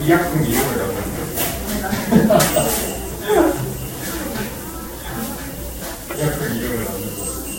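Throughout, the sound swirls and smears with hollow, blurred attacks and nothing above 16.6 kHz, likely generation loss from around ten passes through a Vorbis-like codec near 62 kbit/s.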